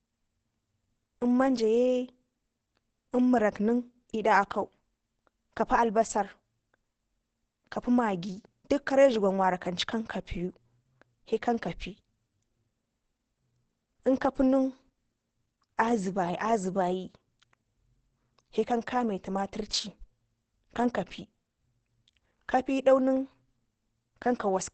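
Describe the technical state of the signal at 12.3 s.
At 12.3 s the speech shows heavy Opus compression, which runs through the whole clip. Nothing is heard above 8.7 kHz. The tone is muffled and hoarse. The likely cause is the encoder switching to its narrower speech mode, which fits a bitrate around 12 kbps.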